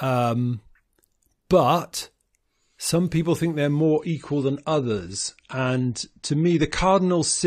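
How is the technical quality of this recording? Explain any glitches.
The recording starts clean but loses quality partway through. From 3.84 s to the end, the speech suddenly sounds duller and more processed, with nothing above 9 kHz. This is an adaptive stream at a lower bitrate: the player switched to a cheaper encoding, which fits a drop from 96 to 32 kbit/s AAC. Unlike a dropout, there's no gap, just an abrupt, sustained change in quality.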